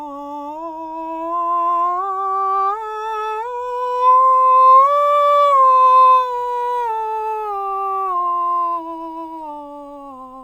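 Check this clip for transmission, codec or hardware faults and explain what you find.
No transmission, codec or hardware faults turn up anywhere in this music clip.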